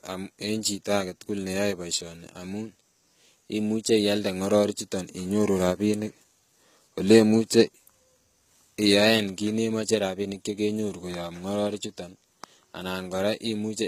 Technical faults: HE-AAC compression

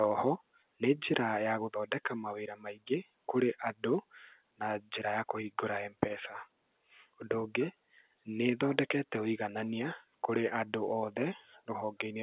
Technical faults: none

